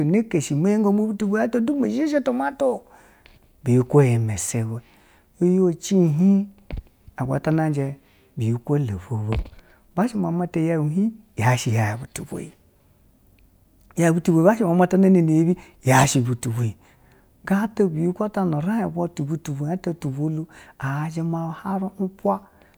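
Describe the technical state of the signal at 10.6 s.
At 10.6 s the speech signal is intact, with no technical fault present at that moment.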